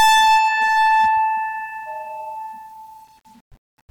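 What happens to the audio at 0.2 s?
At 0.2 s the music is in hard clipping, which runs from the start to 1.09 s. The level is driven about 18 dB past what the stage can pass, so the waveform peaks are sheared flat. Those square tops add harmonics high in the spectrum, heard as a harsh, buzzy fuzz on every loud moment rather than occasional crackle. Unlike soft saturation, which rounds peaks and sounds warm, this distortion is abrupt and gritty.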